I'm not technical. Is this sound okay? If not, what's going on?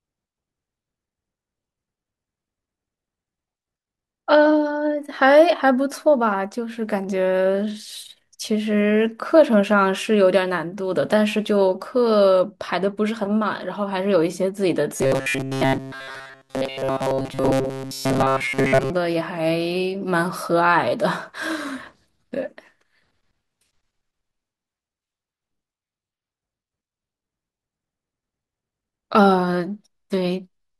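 No. Robotic sound from repeated short buffers, 14.96 to 18.90 s: the speech becomes a metallic 134 Hz buzz, likely because tiny audio snippets were repeated while most of the real sound was skipped.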